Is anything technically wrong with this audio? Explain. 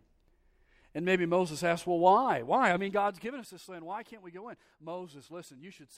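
Yes, there is zipper noise from 2.62 to 3.48 s, just before "this land". The level drops by roughly 15 dB, but in 3 dB jumps about five times a second instead of as a smooth fade. Each abrupt jump puts a small click into the speech, so a faint ticking rides on the sound during the fade. On a waveform the envelope shrinks like a staircase. A spectrogram shows thin vertical broadband lines at each step.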